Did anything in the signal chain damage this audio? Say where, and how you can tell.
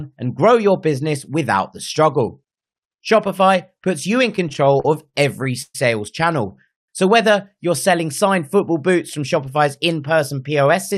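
Yes. Repeated stalls (stutter), 4.36–5.75 s: ten network-side jitter-buffer underruns, the longest 124 ms, drag the speech. About 291 ms is concealed by extending the last sound.

Call audio freeze, 6.71–6.89 s: the speech halts for 174 ms, almost entirely silent, then resumes. It was likely caused by delayed packets emptying the jitter buffer.

Jitter buffer speed-up, 9.22–10.92 s: speech runs about 105% fast at unchanged pitch, because the receiver trimmed pitch-period slices, about a tenth of a second in total.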